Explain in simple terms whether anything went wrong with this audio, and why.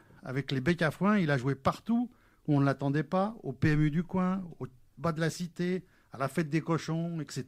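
Nothing went wrong with this audio.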